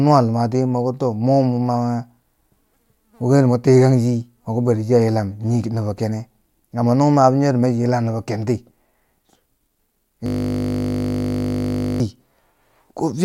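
A system hang loop strikes this speech recording from 10.26 to 12.00 s: a frozen driver recycles one 20 ms buffer about 87 times, producing a steady 50 Hz buzz.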